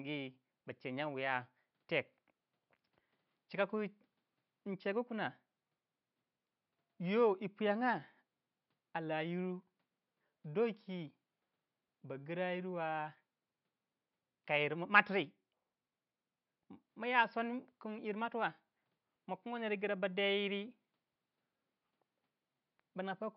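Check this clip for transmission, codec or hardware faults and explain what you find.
No transmission, codec or hardware faults turn up in this speech clip. The only thing underneath is the room's own background noise, sitting about 53 dB below the speech, which belongs to the recording itself.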